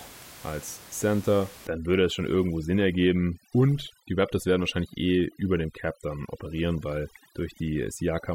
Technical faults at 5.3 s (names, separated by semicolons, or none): overdone noise removal